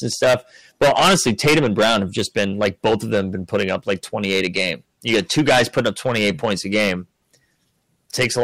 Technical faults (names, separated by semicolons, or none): hard clipping